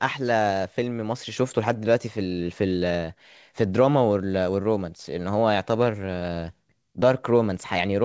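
Listening to this speech, nothing stood out as a problem; it comes through a WebRTC call path using G.722 at 64 kbps, which leaves nothing above 8 kHz.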